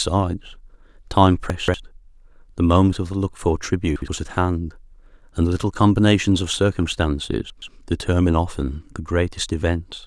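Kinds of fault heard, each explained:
Chunks out of order: a 60 ms block of the speech reached the output late and was played after the blocks meant to follow it. Nothing is lost, but the sequence is scrambled. This happens three times: at 1.5–1.74 s the block is three places late, at 3.96–4.08 s one place late, and at 7.5–7.68 s two places late. Each is heard as a brief jumbled stutter.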